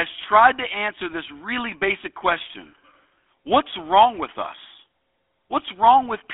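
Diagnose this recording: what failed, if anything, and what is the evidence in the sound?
The codec stage is the culprit, and it's the GSM full-rate codec, through the whole clip. The speech is confined to a telephone band of roughly 300 Hz to 3.5 kHz and carries a clearly audible buzzy, gravelly roughness, consistent with the 13 kbps full-rate coder. That grit comes from the coder rebuilding the speech from a vocal-tract filter driven by a sparse, regularly spaced pulse train that retains only a third of the excitation samples.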